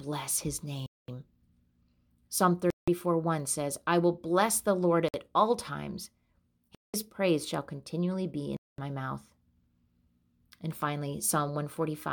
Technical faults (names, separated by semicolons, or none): Bluetooth stall